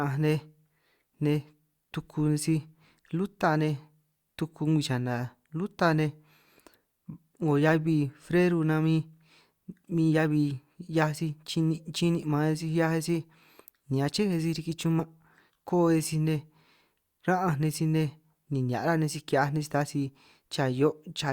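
This speech clip... no. Must not start that way.

Speech, with one fault: compressed frames skipped at about 15.0 s. Roughly one frame, around 20 ms of audio, is missing. The sound jumps ahead at that point.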